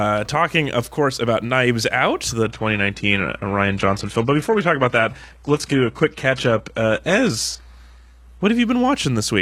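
From 2.43 to 8.43 s the adaptive stream drops to a lower bitrate, which fits a low-rate HE-AAC stream. The speech abruptly dulls, losing everything above 12.3 kHz, with no gap.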